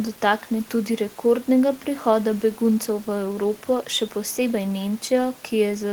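No faults in this speech clip; the only background is the room's own noise, sitting about 28 dB below the speech.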